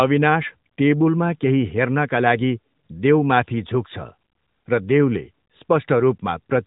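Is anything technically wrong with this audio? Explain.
No, nothing is technically wrong.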